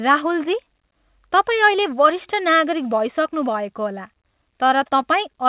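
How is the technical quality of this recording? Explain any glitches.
The speech carries a timing fault that runs through the whole recording, heard through a narrowband telephone-style path with nothing above 4 kHz, consistent with G.711 mu-law.

Clock drift between sender and receiver is present throughout. The sender's clock runs about 3% slower than the receiver's, so the receiver's jitter buffer keeps draining faster than it refills. The result is a slight sluggishness and an unsteady feel to the pacing across the clip.

Repeated timing corrections occur from 0.27 s to 5.03 s. To cover the shortfall, the receiver repeatedly stretches the audio by duplicating short pieces, adding somewhere around 150 ms overall and leaving playback at 97% speed. These uneven small edits are heard, if at all, as faint hiccups and a wavering tempo.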